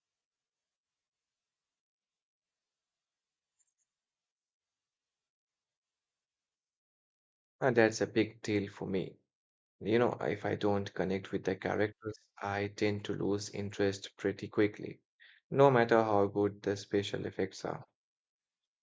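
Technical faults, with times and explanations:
No technical faults can be heard anywhere in this speech recording. Nothing in the signal chain stands out as calling for comment.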